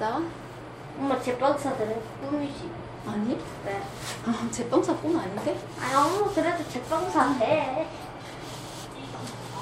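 Nothing here needs flagging, because the sound runs along with no technical faults to point to at any moment.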